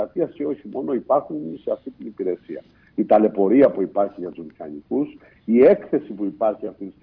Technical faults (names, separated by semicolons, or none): none